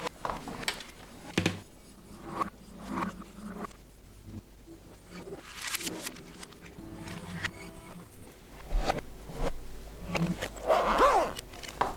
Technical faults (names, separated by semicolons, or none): call bitrate drop